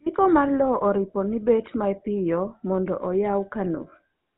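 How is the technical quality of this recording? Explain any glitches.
The quality is poor. The speech has been through the GSM full-rate codec for its whole length. This codec models the vocal tract as a filter and drives it with a sparse train of regular pulses. Only a third of the excitation survives. Nothing above 4 kHz gets through. The result is plainly audible. Voices sound buzzy and gravelly, with a dull, band-limited top. The damage level fits the 13 kbps full-rate mode.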